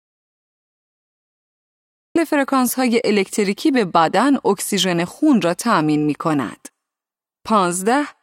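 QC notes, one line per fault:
0.00–2.16 s: audio dropout to silence. The file opens in silence, with no room tone or noise floor, and the speech enters abruptly at 2.16 s, cutting in mid-flow rather than starting naturally. The gap was already running when the clip begins, so the speech from that stretch is missing. The likely cause is a lost input, such as a disconnected device, failed link or accidental mute, while recording continued writing silence.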